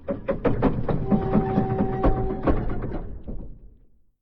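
There are no technical faults to describe at any point in this audio.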